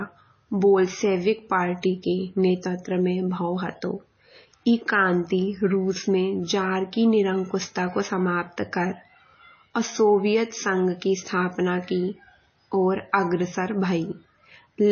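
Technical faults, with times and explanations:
Throughout: MP3 compression, likely. Nothing is heard above 6.6 kHz, and the speech has a watery, swirling quality with smeared attacks, which fits a low bitrate near 24 kbps. Weak frequency lines flicker between frames, unlike a plain low-pass filter, which dulls the sound without that swirl.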